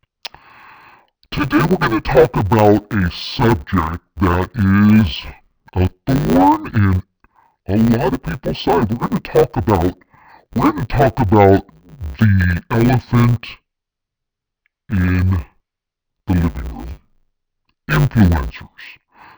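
Throughout the speech, the sound is dull and robotic, with a steady 100 Hz buzz and no clear octave drop. This is interleaved audio read as planar: each 10 ms block of alternating left-right samples is split into halves and played as separate channels at half speed.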